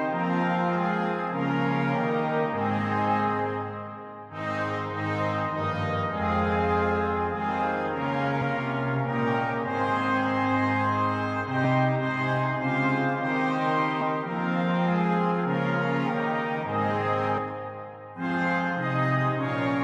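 Brief smeared blips at 8.41, 11.64, 14.0 and 17.37 s, where the sound lurches forward by roughly 70, 70, 150 and 300 ms. These are compressed frames skipped: whole frames of about 23.2 ms went unplayed, and overlapping neighbours soften each join.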